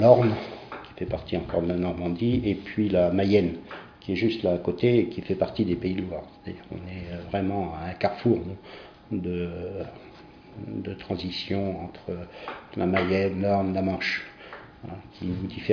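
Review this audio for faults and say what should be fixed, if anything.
Nothing stood out on listening, so there is nothing here that calls for fixing.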